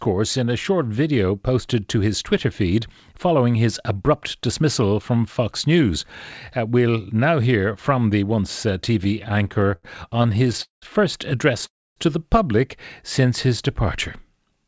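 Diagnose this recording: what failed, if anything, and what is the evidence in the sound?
Network and jitter-buffer stage: repeated stalls (stutter) from 9.04 to 10.84 s, after "from the once uh". There are 26 brief stretched repeats, the longest 195 ms, which show as smeared, repeated spectrogram columns.

Call audio freeze at 11.66–11.98 s, before "to the public", likely from a 300 ms network delay. Concealment fades into about 270 ms of flat, near-empty waveform.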